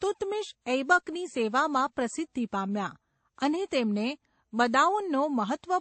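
Throughout the speech, nothing above about 8.3 kHz survives, and smeared, swirling coding artefacts of several different kinds sit on top of one another. This points to transcoding between lossy codecs, likely a low-rate MP3 passed through AAC and then WMA, each adding its own damage.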